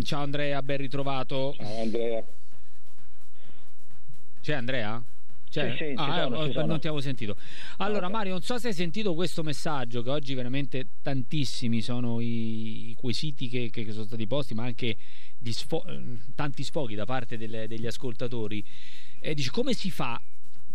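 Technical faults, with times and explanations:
Throughout, DC offset: the whole waveform sits displaced from zero by a constant of about -19 dBFS. The shift itself is inaudible, but it eats into the available headroom on one side and appears as a steady spike at 0 Hz at the bottom of the spectrum.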